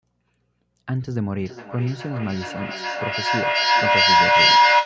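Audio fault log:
1.4 to 4.86 s, feedback howl: a ringing tone around 1 kHz rises out of the speech and climbs to about 10 dB above it, the loop repeating roughly every 0.4 s. A microphone-to-loudspeaker loop gains level each trip, narrowing to its favoured frequency.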